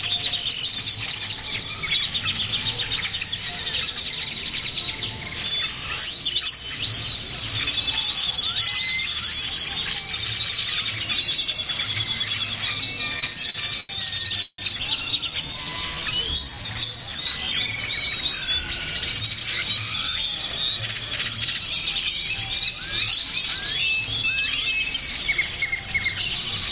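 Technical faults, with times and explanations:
13.19–13.91 s, repeated stalls (stutter): the sound catches and drags in five short hitches, the longest about 88 ms, so it limps rather than flowing. Incoming packets kept arriving late or slower than playback, and the jitter buffer emptied each time. The receiver filled each gap by stretching the last sound, about 175 ms in all, roughly a quarter of this span, before carrying on. Nothing is lost, only delayed.
14.42–14.60 s, call audio freeze: the sound hangs on its last moment as a fading buzz or hiss that drops into about 50 ms of silence, then resumes exactly where it stopped. This is likely a run of packets held up in transit, draining the jitter buffer. The receiver covered the wait with about 162 ms of continued sound and added the same amount to the playback delay. Nothing is skipped; a pause has been inserted.
15.31–17.17 s, jitter buffer slow-down: the sound runs at about 85% speed with unchanged pitch, drawn out. 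The buffer was running low, so to build a reserve the receiver repeated single pitch periods and small slices of quiet many times in succession. That added about 287 ms of playing time. The duplicated cycles cause the lengthening, within the narrow call band that has nothing above 4 kHz.
18.99–22.26 s and 24.78–25.76 s, jitter buffer speed-up: in both stretches the sound runs at about 108% speed at the same pitch and feels rushed. The buffer held more audio than it aims for, so the receiver cut out short pieces of one or a few pitch periods repeatedly to bring the delay back down. Roughly 300 ms disappears from the first stretch and around 70 ms from the second.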